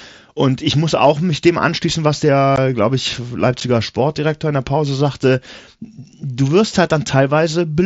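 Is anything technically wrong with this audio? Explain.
Yes. At 2.56 s, between "mich dem anschließen was" and "glaube ich", and again at 3.60 s, just after "glaube ich", the speech drops out abruptly. This is unconcealed Bluetooth headset packet loss: the gaps, about 15 ms and 7.5 ms, suggest lost mSBC packets, and the link fills them with silence or an idle pattern instead of patching over them.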